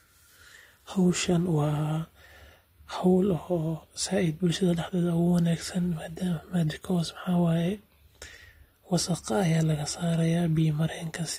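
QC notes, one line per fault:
Nothing stood out on listening through the speech in this clip.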